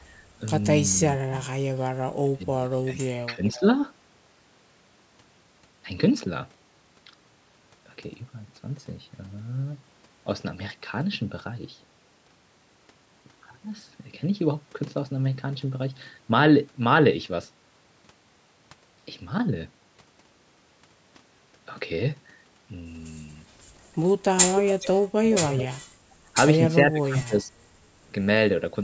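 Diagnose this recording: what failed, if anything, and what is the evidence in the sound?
Call processing, double-talk handling. The speech drops sharply at 1.19–1.27, 2.34–2.85, 3.27–3.63, 25.18–26.05 and 26.87–27.51 s, by up to roughly 30 dB. This is likely speech suppressed in double talk: the echo canceller could not separate the local talker from loudspeaker echo and attenuated both.

Call processing, echo cancellation. A copy of the voice delayed by 420 ms comes back at 24.56–24.88 s, about 5 dB below the speech, and at 25.33–25.65 s, about 15 dB below. This is an echo leak, likely from a loudspeaker endpoint whose canceller left residual microphone pickup in the return path.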